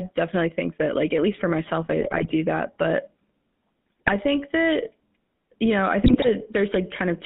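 GSM full-rate codec, throughout: the line is confined to about 150 Hz–3.7 kHz, and the pulse-driven vocal-tract model leaves a plain buzzy, gravelly roughness on the speech.

GSM bit errors at 2.0–2.33 s, after "at least for myself"; 4.06–4.13 s, before "think that"; and 6.02–6.31 s, after "you know i": corrupted filter, pitch and gain values produce squawks, pops and gargling.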